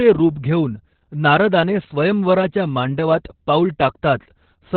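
Throughout the speech there's heavy Opus voice compression: nothing above 4.5 kHz, so it's muffled and hoarse, pointing to narrowband SILK at roughly 8 kbps.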